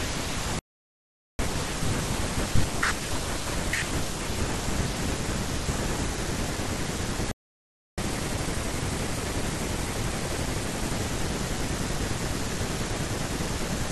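At 0.59 s the speech cuts out for about 0.80 s, a playback stall, likely the player running short of data, until 1.39 s. On a waveform this is a flat line. On a spectrogram it is a blank vertical band with abrupt edges.

From 1.39 s to 4.39 s comes catch-up at higher speed: the backlog is resampled at 1.1 times normal rate, so speech runs faster and sits roughly a semitone and a half higher. Spectrogram harmonics shift upward, then settle back down.

A second playback stall runs from 7.31 s to 7.98 s, about 0.66 s of silence, likely from the same cause. It is followed by catch-up at higher speed from 7.98 s to 10.98 s at 1.15 times speed, raising pitch by about two semitones. Syllables look compressed in time and harmonics rise, until normal rate returns.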